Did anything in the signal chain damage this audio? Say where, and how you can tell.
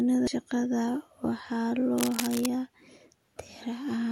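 Yes. At 0.27 s, just before "shaqada waxaa", a brief blip reveals damaged data in the compressed stream; the decoder lost frame sync and resynchronised.

From 1.98 to 2.47 s, after "shaqada waxaa", uneven rustling bursts sit only slightly below the speech: cable scratch noise, likely a disturbed connector in the analogue wiring.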